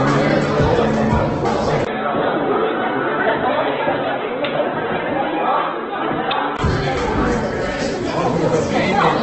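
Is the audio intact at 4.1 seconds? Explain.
No. At 4.1 s the sound falls inside a span from 1.85 to 6.59 s where the input has switched to a poorer device, likely a different microphone or headset profile. A 20 ms gap marks the change. The band then stops near 3.8 kHz, so the sound turns dull and boxy. It also drops a few dB in level and gains a faint new noise floor.

Opus compression also affects this moment, as it does the whole clip. The sound is likely encoded at 12 kbps in CELT music mode. Starved bands get filled with folded or noise content, which makes the sound grainy and rough. Nothing is present above 8.1 kHz.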